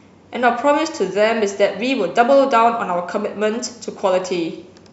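Speech recording with no technical faults to report.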